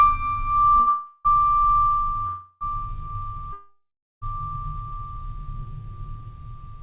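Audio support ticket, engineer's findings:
Short stall from a late packet, 0.76 s: music held for about 17 ms. Jitter buffer ran empty waiting on a late packet, and the receiver stretched the last sound. Nothing dropped, and the playout shifts later. Second short stall from a late packet, 0.80 to 0.89 s: held for 68 ms. Same mechanism, and it runs straight into the freeze below. Band-limited, nothing above 4 kHz, consistent with a G.711 A-law call path.

Call audio freeze, 0.89 to 1.27 s: last sound continued and fading for 361 ms, then the music resumes where it stopped. Call audio freeze, 2.27 to 2.63 s: 341 ms fill, same character. Call audio freeze, 3.53 to 4.24 s: 690 ms, fading to about 420 ms of silence before resuming. Likely cause is packets delayed in transit, with the jitter buffer draining empty. Gaps are inserted and no music is lost.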